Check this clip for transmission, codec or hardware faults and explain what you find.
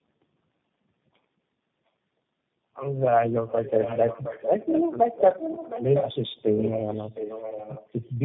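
Two faults are present: tandem speech coding throughout, and an echo leak in three stretches from 3.47 s onward.

Tandem speech coding runs through the whole clip. The speech passed through three low-rate speech codecs in a row, each re-encoding the last one's already damaged output, which fits a chain like G.729A, AMR-NB, then G.729A again. The result is rough, muffled, warbly speech with nothing above 3.8 kHz.

The echo leak is heard from 3.47 to 4.91 s, 5.15 to 6.34 s and 6.56 to 8.17 s. The likely cause is a far-end echo canceller failing to remove its loudspeaker's sound from its microphone. A copy of the speech returns 714 ms late, about 5 dB below it at first, then about 10 dB below.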